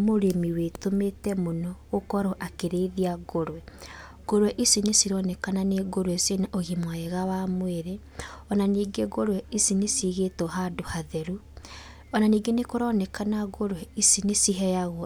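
No technical faults are audible anywhere in the speech recording.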